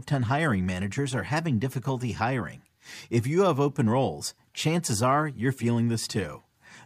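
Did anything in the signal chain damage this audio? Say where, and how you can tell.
No, nothing in the signal chain damaged this audio.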